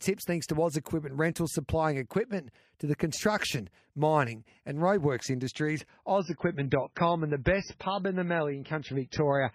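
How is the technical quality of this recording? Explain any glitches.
From 6.19 s, right after "mining and roadworks industries", the speech suddenly turns dull and swirly with nothing above 6.1 kHz: an adaptive stream dropping to a lower bitrate, which sounds like roughly 16 kbit/s MP3 instead of 128.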